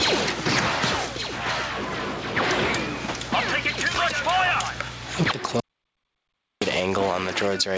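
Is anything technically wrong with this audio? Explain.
Yes. Gain pumping runs throughout: gain likely set far too high, with a fast limiter clamping each loud sound, so the gain swings by around 20 dB. The call path's cut-off at 8 kHz fits a G.722 codec.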